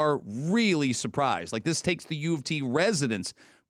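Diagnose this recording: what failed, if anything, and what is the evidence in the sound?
Nothing failed; no stage shows any audible fault here.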